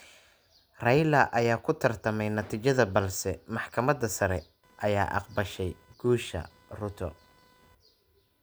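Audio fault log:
3.79–8.43 s computer activity noise: from 3.79 s to the end, a faint chirping buzz appears, pulsing at roughly 500 times per second and sitting around 35 dB below the speech. Processor or graphics load is shifting the audio circuit's shared ground, so the interference follows the computer's workload rather than the talker. Unlike steady mains hum, it has a higher, irregular pulsing texture that doesn't track the speech.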